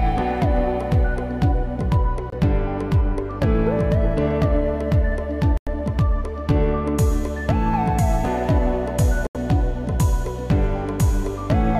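The sound cuts briefly to silence three times: about 23 ms at 2.30 to 2.34 s, about 94 ms at 5.57 to 5.68 s, and about 82 ms at 9.27 to 9.37 s. These are Bluetooth stalls, likely from interference delaying packets until the headphones' buffer ran empty and playback halted for the resends. Unlike a codec dropout, which smears or garbles the sound, each gap is true silence before the audio resumes.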